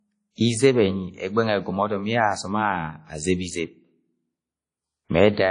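Throughout the speech, plainly audible WMA compression damage: a washy, ringing smear with hiss that swells and fades with the signal, and nothing above 10.1 kHz. Unlike MP3's sharper warble, this spreads over longer blocks, likely from a low bitrate near 32 kbps.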